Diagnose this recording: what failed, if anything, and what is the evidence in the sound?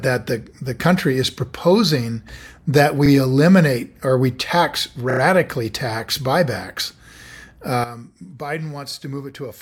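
Repeated frames, at the codec or storage stage: right after "eliminate or we tax", from 5.10 to 5.20 s, the same 32 ms chunk plays three extra times before "tax buybacks". That fits a single compressed frame being re-sent, giving a short stutter and stretching the audio by 96 ms.

Sudden gain jump, in the digital gain stage: at 7.84 s the speech and the background noise both drop by about 12 dB at once, and the level stays down to the end. The likely cause is a gain setting or bit shift applied instantly instead of ramped.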